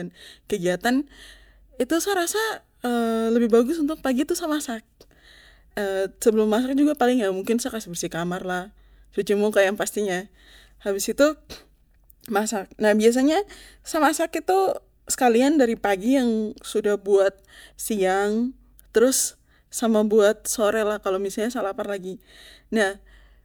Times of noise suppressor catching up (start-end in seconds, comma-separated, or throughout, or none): none